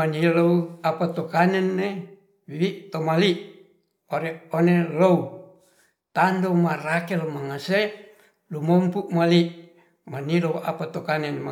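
No technical faults can be heard in this speech recording.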